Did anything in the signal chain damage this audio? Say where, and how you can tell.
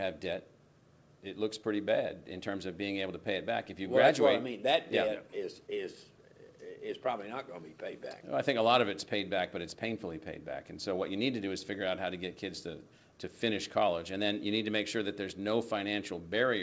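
Yes. At the network and jitter-buffer stage there is clock drift between sender and receiver: the sender's clock runs roughly 4 percent fast, so packets arrive quicker than the receiver plays them out. The buffer keeps overfilling, and small timing hiccups recur throughout.

The repeated timing corrections run from 0.33 s to 16.44 s. The receiver keeps cutting short pieces to drain the excess, giving an effective rate of 104 percent. The cuts all go one way at uneven spacing, within the G.722 path's 8 kHz band limit.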